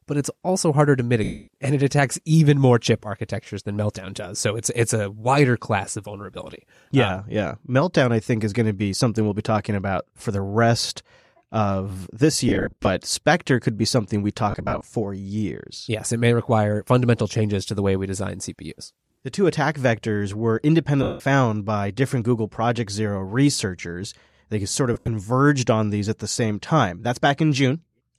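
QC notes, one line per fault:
1.24–1.48 s, 12.49–12.87 s, 14.51–14.87 s, 21.03–21.20 s, 24.94–25.08 s: lost LE Audio frames. Gaps of 100 to 240 ms are filled with a noisy, smeared repeat of the preceding spectrum that fades toward silence. The drops at 12.49, 14.51 and 24.94 s are scattered in short runs of up to about 40 to 70 ms. The drop at 14.51 s falls between "could be something we" and "for years", and the one at 21.03 s falls between "two attack vectors were" and "by different".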